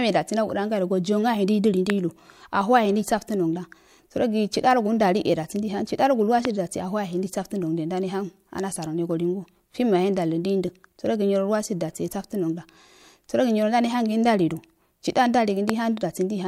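Loud pops at 1.90–1.92 s, 6.45–6.47 s and 15.69–15.72 s: single sharp clicks about 15 dB, then about 20 dB twice, above the speech, which carries on underneath. Each is likely a brief voltage spike, from a switch, plug or static, entering the signal path.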